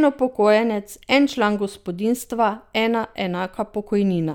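Speech recording, with no technical faults found anywhere in the clip.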